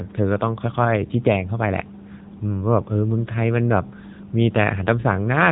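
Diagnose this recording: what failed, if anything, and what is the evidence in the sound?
Codec stage: the whole clip has gone through an AMR narrowband mobile codec. Nothing above 3.8 kHz, and buzzy, synthetic speech fits a low mode around 8 kbps.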